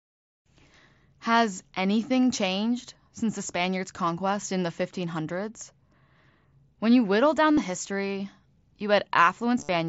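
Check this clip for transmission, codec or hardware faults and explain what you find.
Yes, two short dropouts point to concealed Bluetooth headset packet loss on the wideband mSBC headset link, which caps the audio near 8 kHz with light grain. At 7.54–7.57 s and 9.59–9.69 s, lost headset packets were filled by repeating the best-matching recent stretch of waveform. The later event includes a run of about 52 ms, which gives a brief buzzy held tone and a slight warble as real audio resumes.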